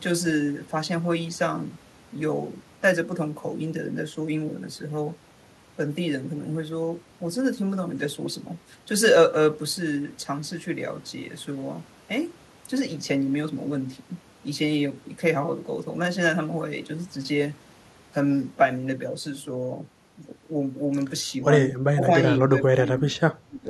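From 22.47 to 23.18 s and 23.46 to 23.68 s, the speech dips by up to about 15 and 20 dB in brief pieces, likely speech suppressed in double talk by an echo canceller.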